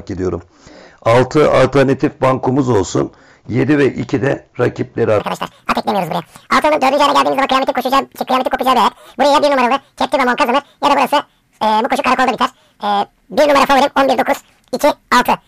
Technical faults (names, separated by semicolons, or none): audio read two samples at a time (double speed)